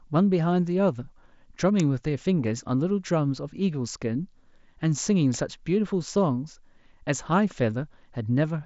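At 1.80 s and again at 5.34 s a sharp snap sits on top of the speech, an electrical switching spike, likely a nearby switch arcing into the line. Unlike a dropout, nothing is lost underneath; the crackle is simply added.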